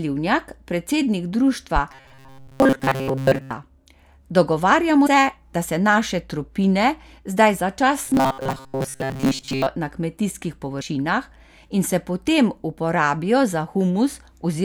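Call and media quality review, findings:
Robotic sound from repeated short buffers, 1.92 to 3.51 s and 8.06 to 9.68 s: speech turns into a rigid metallic buzz at 134 Hz, roughly tracking the words. Likely buffer underrun, with a block of about 7.5 ms looped while most real audio is skipped.

Damaged data in a compressed stream, 5.03 to 5.07 s and 10.78 to 10.82 s: brief chirp or blip, about 40 ms each. Corrupt frames misread by the decoder, which loses sync and resumes at the next frame header.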